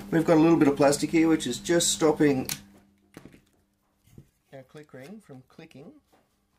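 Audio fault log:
No faults are present in this clip.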